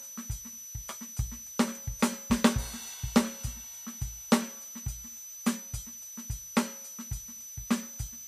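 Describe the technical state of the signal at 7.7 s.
A thin, high whistle sits about 15 dB under the music at 7.7 s, wandering between 5.97 and 6.02 kHz as it does throughout the clip. This switching supply whistle comes from a power supply cycling in an audible burst mode or beating with another supply.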